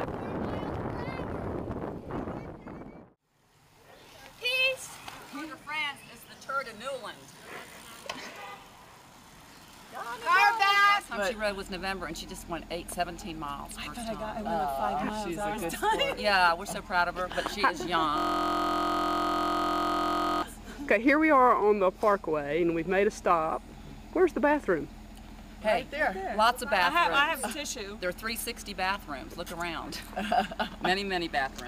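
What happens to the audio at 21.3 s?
Nothing goes wrong at 21.3 s: the audio plays through that moment intact, with no dropout, click, glitch or other fault.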